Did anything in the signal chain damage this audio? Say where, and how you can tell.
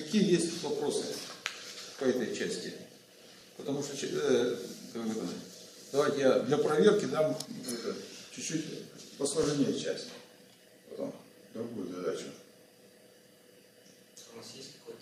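Yes. The fault sits at the buffering stage, where the audio was handled in 6-second chunks and each chunk began slightly before the previous one finished. These are overlapping chunks. At each join, about 25 ms of sound plays twice: at 3.41 to 3.44 s and at 9.44 to 9.46 s. The two events are about 6 seconds apart. Each repeat is heard as a brief click or stutter.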